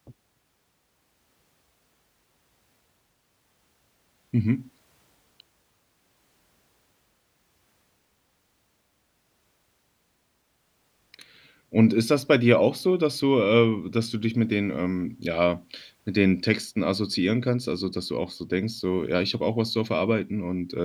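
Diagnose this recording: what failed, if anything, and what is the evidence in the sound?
Listening closely to the speech, nothing in the recording stood out as a failure at any stage of the chain.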